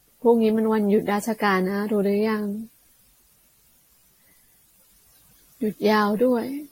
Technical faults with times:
0.00-6.71 generation loss

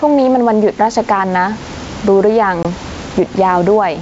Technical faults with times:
0.00-4.01 gain pumping
2.63-2.66 packet loss on an ADPCM call

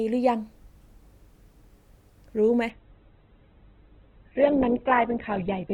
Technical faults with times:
2.70-5.73 adaptive stream at a lower bitrate

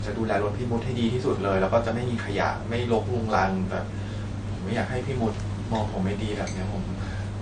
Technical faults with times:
0.00-7.42 transcoding between lossy codecs

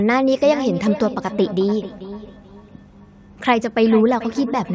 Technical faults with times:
0.43-4.75 feedback echo between two devices

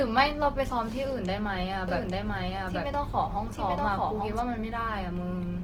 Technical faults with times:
0.00-5.63 Opus compression
1.88-4.40 doubled audio track

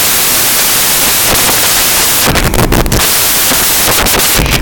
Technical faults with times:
0.00-4.61 samples built from the wrong bytes

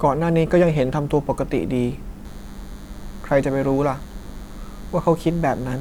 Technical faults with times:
2.25-5.80 DECT cordless phone buzz

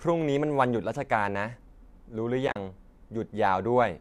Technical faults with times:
2.48-2.56 AAC frame loss with muting

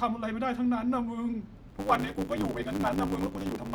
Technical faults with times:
1.67-3.75 block size mismatch (truncated)

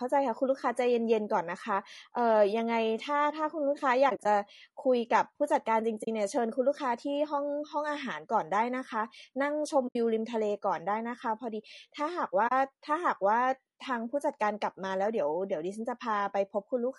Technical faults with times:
0.00-16.99 low-delay AAC compression
4.09-4.26 AAC frame loss with muting
6.03-6.08 AAC frame loss with muting
9.87-9.96 AAC frame loss with muting
12.47-12.52 AAC frame loss with muting

